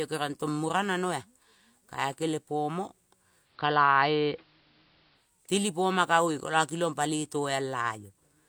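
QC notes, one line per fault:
3.39–5.32 s, digital radio blending to analogue: after "kae kelepomo" the sound dulls, turns faintly hissy and shifts in level by about 3 dB, then clears again before "telipoma kagoe kola". The receiver lost its digital stream and cross-faded over about 187 ms to the station's AM broadcast, whose narrow channel cuts the treble and adds a hiss floor roughly 35 dB below the signal, then faded back to digital.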